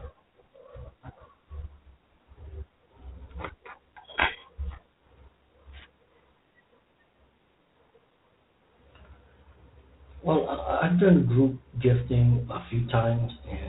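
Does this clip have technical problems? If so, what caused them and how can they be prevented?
Yes. G.726 ADPCM at 24 kbit/s runs throughout: three bits per sample encode the error from an adaptive prediction, so a harsh, rasping hiss tracks the speech level. A spectrogram shows nothing above 4 kHz and grainy noise between harmonics. Using 32 kbit/s or a wideband codec prevents this.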